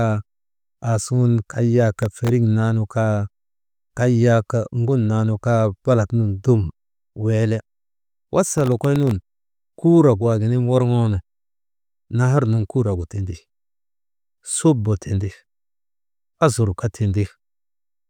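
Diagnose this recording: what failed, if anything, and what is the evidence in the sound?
Processor overload crackle at the driver/buffer stage, 1.99–2.29 s and 8.58–9.11 s: gritty bursts of silent gaps from missed deadlines on very short buffers, under a millisecond each.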